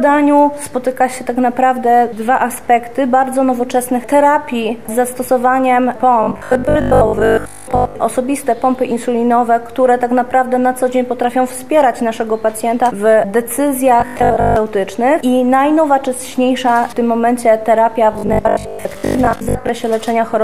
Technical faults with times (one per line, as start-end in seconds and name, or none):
6.23-7.97 robotic sound from repeated short buffers
14.00-14.56 robotic sound from repeated short buffers
18.13-19.69 robotic sound from repeated short buffers